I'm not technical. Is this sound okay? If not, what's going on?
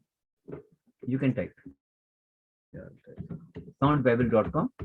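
No. At 1.71 s the sound stops for about a second and picks up again at 2.75 s. This is a call audio freeze: the likely cause is data held up on its way across the network, so the receiving end ran out of sound to play. It briefly stretches the last bit of sound, then goes silent for almost all of that second. When the data arrives, playback continues exactly where it paused, so nothing is lost; everything after it simply runs one second late.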